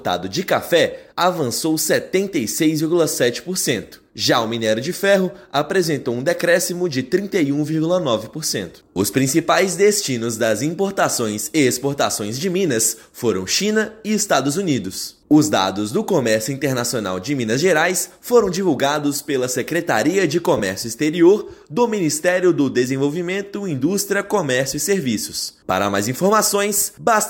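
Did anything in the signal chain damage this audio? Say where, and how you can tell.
Yes. The Bluetooth link dropped LE Audio frames at 20.58 to 20.60 s. The gap is about 15 ms, which fits a couple of lost frames. The LC3 decoder concealed it by repeating the last received spectrum with randomised signs. That turns any tonal content in that instant into a brief noisy smear, a soft hiss-like blur rather than a hard click. The gap is too short for the concealment's fade toward silence to become audible.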